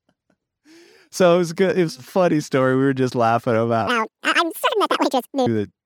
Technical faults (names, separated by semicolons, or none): audio read two samples at a time (double speed)